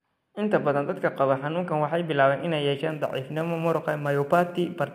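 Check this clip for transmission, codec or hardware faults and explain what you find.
One hardware fault is present: sample clock jitter from 2.90 s to the end. The converter's clock wanders by around 7 microseconds, so samples land early or late, and the error scales with waveform slope. It sounds like a roughness or hiss roughly 30 dB below the speech that rises on loud, bright sounds and disappears in pauses. A spectrogram shows broadband noise tracking the speech energy, strongest under high-frequency content, while the waveform looks essentially unchanged.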